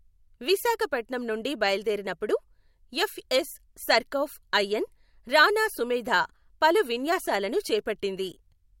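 A speech recording, and nothing is technically wrong with it.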